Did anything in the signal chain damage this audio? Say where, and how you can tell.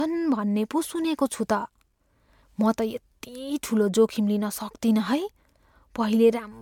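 Yes. At the codec stage, generation loss runs throughout: swirly, hollow speech with blurred attacks, likely from MP3 being re-encoded around four times, consistent with 128 kbit/s. Content reaches 20.1 kHz, so this is accumulated smearing rather than a single low-bitrate pass.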